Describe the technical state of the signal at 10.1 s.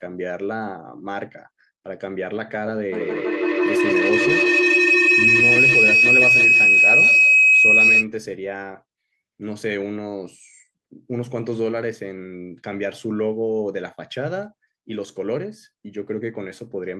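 At 10.1 s the speech signal is intact, with no technical fault present at that moment.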